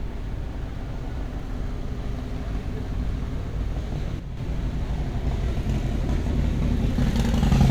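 From 4.19 to 4.37 s the sound drops abruptly by about 6 dB, with anything carried in only one side vanishing: likely one channel drops out before the mono sum. Unlike a gain dip, the fall is exactly half-level and removes one side's content.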